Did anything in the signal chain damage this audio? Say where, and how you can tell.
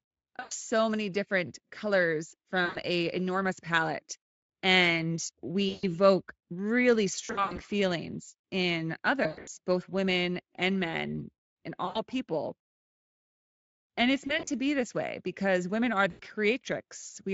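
Yes, at the network stage: VoIP packet loss concealed by the speech codec. Dropouts at 0.39, 2.65, 5.69, 7.25, 9.23, 11.85, 14.27 and 16.11 s become buzzy tones or coloured noise that fade as the decoder extrapolates over the missing packets.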